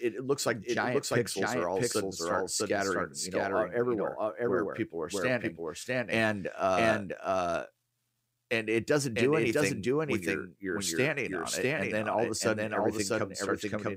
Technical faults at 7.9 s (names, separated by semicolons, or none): doubled audio track